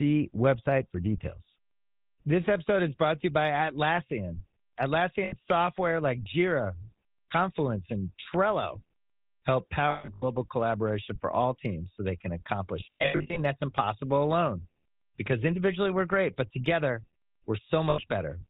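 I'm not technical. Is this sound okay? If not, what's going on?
No. The whole clip has passed through the GSM full-rate codec, an early mobile-phone voice coder. It rebuilds the speech from a simplified model and keeps nothing above 4 kHz, so the speech sounds muffled, buzzy and gravelly throughout.

There are also lost GSM frames, where short stretches of sound went missing and were patched with a rough, metallic ring. The patches fall at 5.24 s, before "software like"; 9.9 to 10.24 s, before "collaboration for all teams"; 12.8 to 13.39 s, between "teams so they can" and "that's impossible alone"; and 17.9 s.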